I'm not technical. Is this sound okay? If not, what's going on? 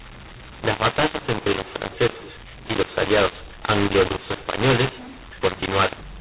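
No. The speech sounds harsh and crackly from start to finish, and even the pauses hiss. This is a mu-law and A-law mix-up: the telephone audio was packed with one coding rule and unpacked with the other, so loud and quiet parts come out wrong.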